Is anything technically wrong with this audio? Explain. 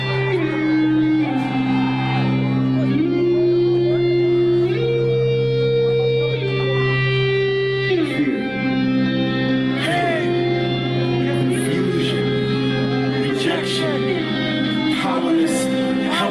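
No, nothing technically wrong stood out on listening to this audio.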